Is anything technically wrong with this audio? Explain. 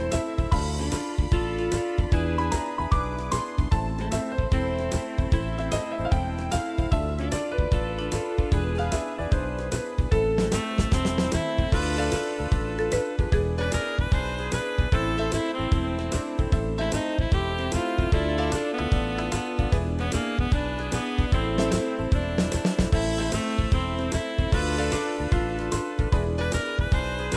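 No, nothing is technically wrong with this audio.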